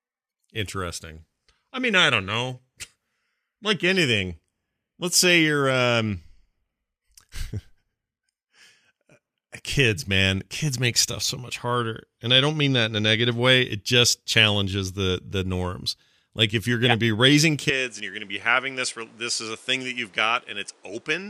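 At 17.70 s, right after "to yeah be raising", the speech turns duller and a few dB quieter through to the end, with a new noise floor well below the signal, likely an input switched to a poorer device. A spectrogram shows content stopping abruptly above 11.4 kHz, and the waveform shows a slightly lower envelope with no gap at the switch.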